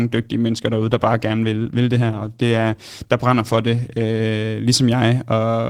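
From the start until 4.2 s the speech sounds dull and smeared, with thin or synthetic treble and strong codec artefacts. At 4.2 s it suddenly clears without any gap. This is an adaptive stream starting at a low bitrate: the player began on a cheap encoding, consistent with Opus around 16 kbit/s, then switched up, plausibly to about 64 kbit/s.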